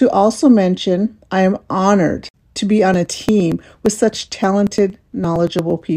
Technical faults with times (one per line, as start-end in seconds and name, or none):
2.94-5.82 periodic USB or driver dropouts